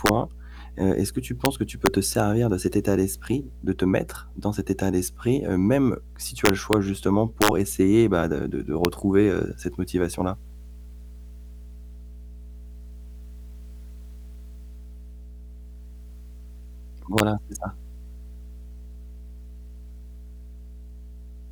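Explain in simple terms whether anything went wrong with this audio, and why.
Yes, two things went wrong. Mains hum, a steady low 60 Hz tone leaking in from the power supply, runs under the whole recording and stays constant rather than rising and falling with the speech. Integer overflow causes violent cracks when loud peaks exceed the digital maximum and wrap around instead of being limited. These cracks are much harsher than ordinary clipping distortion. They occur at 0.06 to 0.09 s, at 1.45 s, at 1.86 s right after "que tu", at 6.45 to 6.73 s after "heu même si tu", at 7.42 to 7.48 s, at 8.85 s, and at 17.18 s just before "c'est ça".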